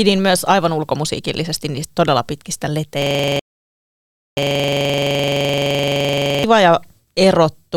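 At 3.02 s, after "ulkomusiikillisesti niistä todella pitkistä", a system hang loop repeats one 42.67 ms fragment 57 times until 6.44 s, a steady 23.4 Hz buzz that fits a 2048-sample buffer. From 3.39 to 4.37 s, a rebuffering stall cuts the sound to silence, adding about 0.98 s before playback resumes exactly where it stopped.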